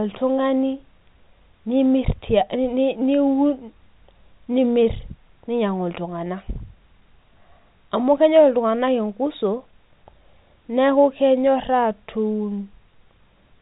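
No faults can be heard in this telephone-band speech.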